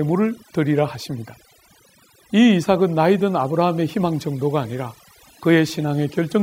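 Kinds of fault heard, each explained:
Overdone noise removal: noise reduction set too hard throughout the speech, muting bands near the noise estimate, leaving near-silent gaps with twinkling specks.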